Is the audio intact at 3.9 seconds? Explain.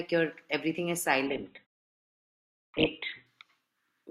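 Yes, the speech is intact at 3.9 seconds, with no fault at that moment.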